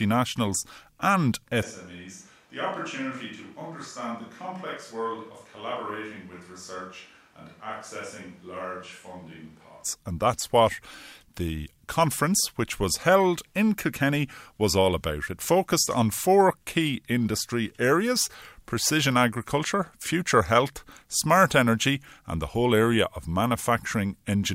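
From 1.64 s to 9.83 s the speech abruptly turns roomy and hollow, loses bass, drops by roughly 10 dB, and sits over room noise only about 25 dB below it. It snaps back to the close sound at 9.83 s. This is likely a switch to a distant microphone after the close one dropped out. A plain gain dip would keep the same tone, and added reverb would not thin the low end or raise the background.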